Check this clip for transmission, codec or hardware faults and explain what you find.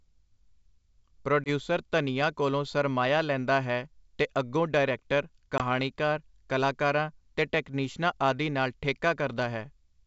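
Two dropouts from packet loss on an ADPCM call occur here, at 1.44–1.49 s, just before "ਧਨੀਆਂ ਕੋਲੋਂ ਸਰਮਾਇਆ ਲੈਂਦਾ", and at 5.58–5.62 s, right after "ਤੇ ਅੱਗੋਂ ਡਾਇਰੈਕਟਰ". Each loses about 20 ms, which points to a single dropped packet filled with silence. The receiving ADPCM decoder's predictor and step size then disagree with the sender's, so the speech resumes slightly distorted and settles within tens of milliseconds. A waveform shows a flat gap with a sharp edge, and a spectrogram shows a blank vertical stripe.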